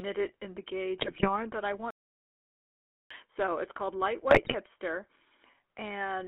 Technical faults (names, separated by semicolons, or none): GSM full-rate codec; GSM bit errors; playback stall